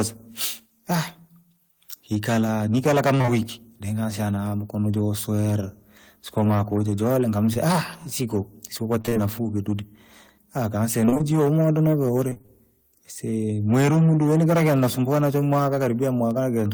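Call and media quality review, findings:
Hard clipping, whole clip. Gain stage ahead of the converter or encoder driven about 14 dB past full scale, so the loudest peaks, a small share of the signal around 7% of samples, are sheared flat. Flat tops throw harmonics high up the spectrum: harsh fuzz riding every loud syllable of the speech, not just occasional crackle. Probable component: input gain or AGC before the first fixed-point stage.

Short concealed packet loss, 3.17 to 3.29 s and 7.53 s. Jitter buffer received nothing in time; the decoder's concealment extended the preceding sound and crossfaded back. At 3.17 to 3.29 s three back-to-back holes, each about 20 ms, which fits 20 ms packets, heard as one smeared, wobbling patch; at 7.53 s a single brief smear. Probable component: network path or jitter buffer depth.

Repeated packet loss (robotic sound), 9.01 to 9.17 s, 11.05 to 11.22 s, 12.30 to 12.50 s. 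Bursts of closely spaced losses, longest hole about 26 ms, with roughly half of each span patched rather than received. Concealment restarts before real audio recovers, so each burst turns choppy, with pieces of the speech missing. Probable component: congested or lossy network link, bursty rather than random.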